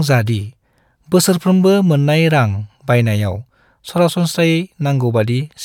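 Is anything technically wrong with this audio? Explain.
No, nothing technically wrong turns up anywhere in this speech recording, so there's nothing here to flag.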